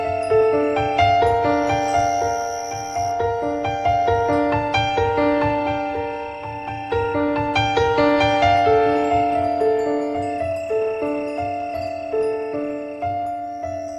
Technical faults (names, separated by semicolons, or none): none